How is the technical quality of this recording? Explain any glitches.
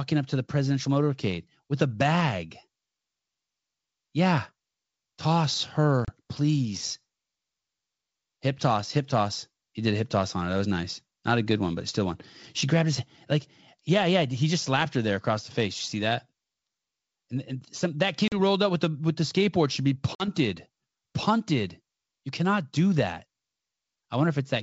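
The speech is wideband G.722 telephone audio, clear well above the narrowband limit, and it has three dropouts from packet loss on an ADPCM call.

At 6.05 to 6.10 s, 18.28 to 18.37 s and 20.15 to 20.28 s, about 30, 40 and 50 ms of packets go missing and become hard-edged silences. The decoder's adaptive predictor and step size fall out of step with the sender's, so the speech comes back slightly distorted until they realign.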